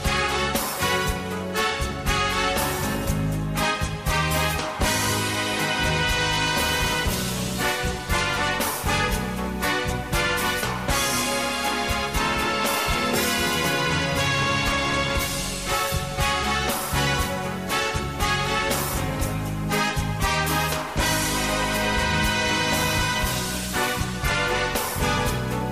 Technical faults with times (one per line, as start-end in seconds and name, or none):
6.29-25.72 stuck bit